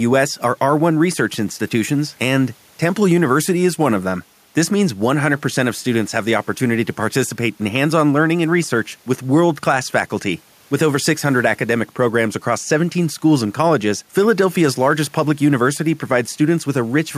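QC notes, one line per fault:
No faults heard in the speech recording; nothing to log.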